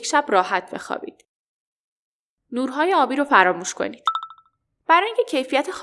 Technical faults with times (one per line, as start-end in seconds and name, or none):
none